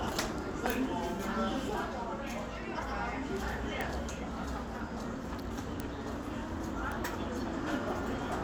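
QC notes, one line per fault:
0.70 s, 3.81 s, 5.80 s and 6.92 s: bit error spike. Each is a lone sharp tick with no relation to the surrounding sound, peaking around -11, -17, -17 and -23 dBFS. A flipped bit knocks one sample, or three at 0.70 s, off by a power of two before snapping back, so the energy spreads across the whole spectrum.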